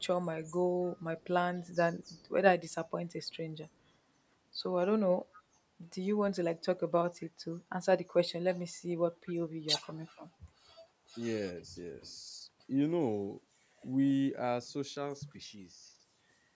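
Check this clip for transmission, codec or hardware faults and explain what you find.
Two faults are present: echo leak and speech suppressed in double talk.

Echo leak at 0.84–1.03, 1.2–1.26, 2.04–2.29, 5.33–5.43 and 7.2–7.25 s: a faint copy of the speech returns 250 ms late, likely from a canceller missing loudspeaker pickup.

Speech suppressed in double talk at 9.61–9.68 s: the talker drops about 25 dB for 70 ms, likely the canceller ducking both sides during overlap.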